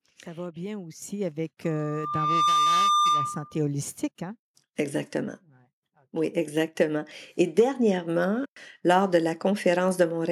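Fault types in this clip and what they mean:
Microphone volume stepped up: Just after "va bien", at 1.02 s, the input level jumps by about 8 dB in one step. Voice and background noise get louder together, as if the capture device's gain was raised.
Loudspeaker feedback squeal: From 1.64 s a single 1.2 kHz tone builds up over less than a second. It settles at about 5 dB above the speech. It stops at 3.61 s, just before "holistique hein". The microphone was picking up its own loudspeaker output.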